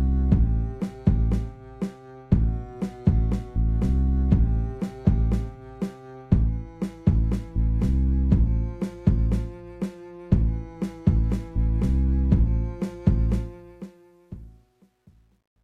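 From 13.35 s to the end at 15.64 s, the closing fade-out turns grainy. From about 14.49 s onward it is at its most gritty instead of sinking smoothly away. This is truncation distortion on a fade. The gain stage rounded each sample to a coarse grid without dither, which fits a stage keeping only 11 bits. As the level drops toward the smallest steps, the waveform collapses into a few square jumps.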